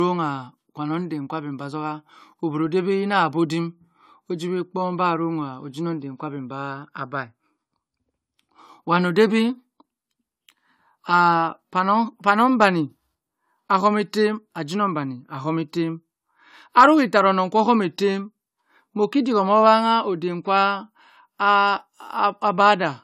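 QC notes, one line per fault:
Throughout: generation loss. Speech is swirly, smeared and hollow, cut off above 19.1 kHz. Likely about three AAC-LC re-encodes, each adding fresh quantisation noise.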